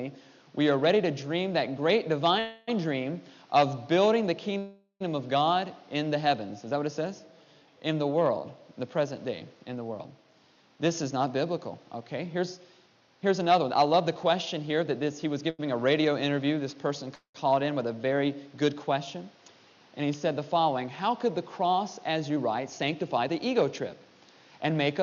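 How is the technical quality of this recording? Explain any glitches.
The recording has clear network-playback problems: three dropouts where the audio is held and then resumes, one brief stall, and stretches that run fast or slow.

Call audio freeze at 2.39–2.69 s, 4.58–5.02 s and 17.15–17.36 s: the last sound carries on as a decaying buzz or hiss for 281, 420 and 191 ms. The second and third fade fully to silence for the final 90 and 110 ms. The likely cause is late packets emptying the jitter buffer. Playback then resumes where it stopped, so nothing is lost, but a gap is inserted.

Jitter buffer speed-up at 10.24–14.85 s and 22.30–24.11 s: the audio plays at 109% speed with unchanged pitch and sounds hurried. The receiver trimmed repeated short pitch-period slices, about 0.4 s and 0.2 s in total, to shrink an overfull buffer.

Short stall from a late packet at 15.50–15.61 s: a sound is held 86 ms too long. 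The buffer briefly ran dry, so the receiver stretched the last sound until the packet arrived. Nothing is missing.

Jitter buffer slow-down at 16.27–18.14 s: playback runs at 98% speed with the same pitch, so sounds are slightly drawn out. Repeated pitch periods added 39 ms to rebuild a low buffer, and the third freeze falls inside this stretch.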